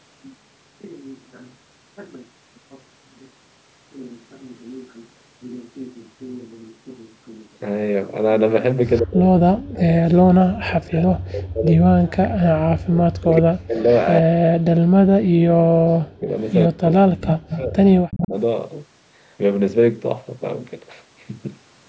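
An echo canceller on the far end, likely one feeding a loudspeaker, is letting part of its pickup leak back. The first echo leak comes at 8.94 to 9.02 s: a faint copy of the speech, about 30 dB down, arriving 123 ms late. From 9.0 to 13.82 s, the speech is suppressed in double talk. The canceller seems unable to separate the near talker from the echo while both sides are active, so it pulls the speech down in chunks, at worst by roughly 40 dB, and whole stretches fade or drop out. A brief echo scrap, about 25 dB below the speech, follows at 13.89 to 13.99 s. The same suppression returns from 14.21 to 16.29 s, again chopping the speech. Echo leaks again at 16.4 to 16.53 s. A third suppressed stretch runs from 16.67 to 18.33 s. Inside it, at 17.28 to 17.61 s and 18.1 to 18.28 s, the 123 ms echo grows much louder, only about 10 dB under the speech.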